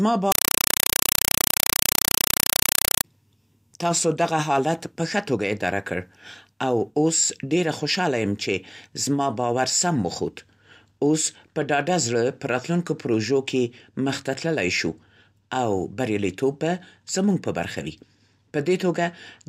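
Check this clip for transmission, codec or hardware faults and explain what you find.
One fault is present: a compressed stream played as audio. From 0.32 to 3.04 s, the speech is replaced by very loud chattering static. An undecoded Dolby Digital bitstream is being treated as samples. Each frame gives a 4 ms noise burst then zero padding, 31.25 times a second. That steady frame rhythm, which fits an AC-3 stream, separates it from random digital noise or dropouts.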